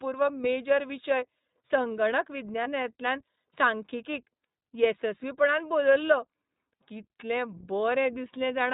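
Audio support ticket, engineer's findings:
iLBC codec throughout: band-limited, nothing above 4 kHz, speech plainly rough and synthetic. Narrowband VoIP coding, fits the 15.2 kbps, 20 ms frame mode.

Lost iLBC frames, 2.64–2.68 s: brief 20 ms held, buzzy vowel-like fill. Decoder concealment repeating the last pitch cycle with noise, consistent with one dropped frame; recovers immediately after.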